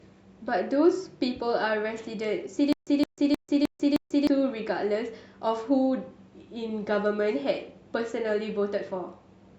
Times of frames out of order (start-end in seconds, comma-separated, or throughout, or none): none